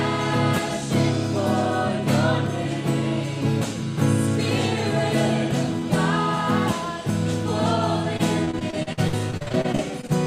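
From 8.17 s to 10.10 s the audio turns choppy and robotic from repeated packet loss: frequent dropouts up to 53 ms are patched by extending prior sound, concealing roughly a quarter of that stretch.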